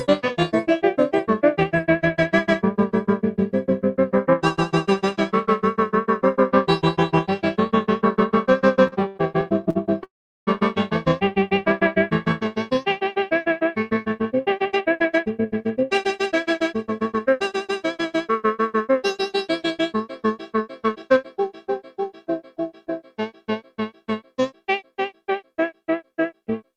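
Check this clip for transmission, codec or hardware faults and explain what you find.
Three network-related faults are audible: a stutter, a freeze and two speed-ups.

Repeated stalls (stutter), 8.87–9.77 s: four short waits, the longest 72 ms, are bridged by repeating the last sound. The audio drags, and a spectrogram shows smeared, repeated slices.

Call audio freeze, 10.03–10.49 s: a 0.44 s gap opens in the sound, and 0.38 s of it is flat silence on the waveform. Its likely cause is held-up packets emptying the jitter buffer.

Jitter buffer speed-up, 14.14–17.52 s at 112% and 20.88–21.26 s at 113%: repeated pitch-period cuts remove about 0.4 s and a few tens of milliseconds. The sound hurries at unchanged pitch, and the spectrogram looks horizontally compressed.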